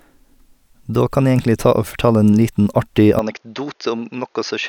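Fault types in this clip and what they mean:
Input switched to a poorer device: at 3.19 s the speech suddenly turns duller and drops by around 10 dB, with nothing above 6.7 kHz and a faint new noise floor well below it, with no gap at the change. That most likely means the recording jumped to a narrower-band microphone.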